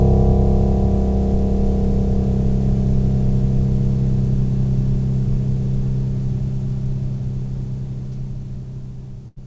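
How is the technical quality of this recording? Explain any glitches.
The recording has one glitch near the end. Throughout, the call-path coding leaves nothing above 8 kHz, which fits G.722.

From 9.28 to 9.38 s there is a burst of packet loss. The receiver stretched and faded the last sound for 84 ms, and then 80 ms of the music is missing. On a spectrogram this shows as a smeared, dimming band followed by an abrupt jump.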